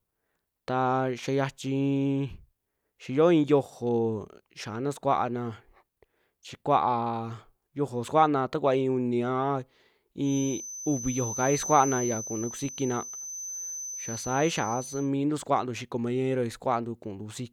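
At 10.2–15.1 s a 6.1 kHz feedback whistle wavers about 10 dB under the speech, likely from a speaker-microphone loop. Unlike hum, it is one high tone.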